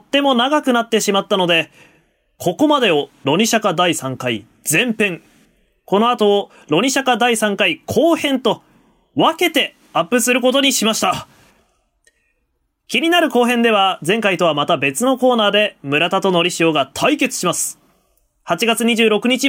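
No technical faults can be heard anywhere in the recording; the speech signal stays steady and intact throughout.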